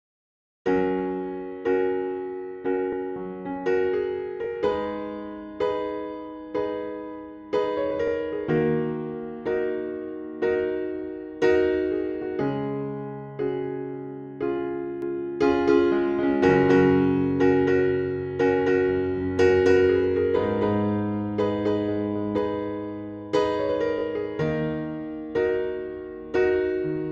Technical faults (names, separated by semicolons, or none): repeated frames; doubled audio track